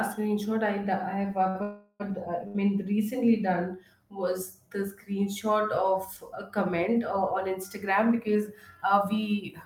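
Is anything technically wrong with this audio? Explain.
Yes. The speech has three kinds of network-timing fault.

Short stall from a late packet, at 1.49 to 1.57 s and again at 2.48 to 2.57 s, just before "recently done". Each time a packet had not arrived when it was due, so the jitter buffer ran dry and the receiver held the last sound until the packet turned up, about 53 ms and then 69 ms. Nothing is lost, but a sound lingers unnaturally, with a faint buzzy smear before the speech picks up again.

Call audio freeze, from 1.63 to 2.02 s. The likely cause is packets held up in transit long enough to empty the jitter buffer. The receiver keeps extending the last sound for about 0.37 s as a fading buzz or hiss. It never drops to full silence. The speech then resumes exactly where it stopped, so a pause has been inserted and nothing is cut, though everything after it arrives later.

Jitter buffer speed-up, from 8.28 to 9.01 s. 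The buffer had built up more audio than it targets. To shed that backlog, the receiver trimmed many small slices of one or a few pitch periods, about 40 ms in total. The speech plays roughly 5% fast at unchanged pitch, so this stretch sounds slightly rushed.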